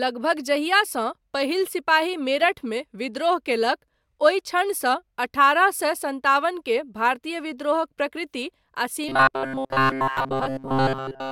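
From 9.09 to 11.31 s the speech turns into robotic sound from repeated short buffers. A rigid buzz near 133 Hz replaces most of it, likely from a 7.5 ms buffer repeating.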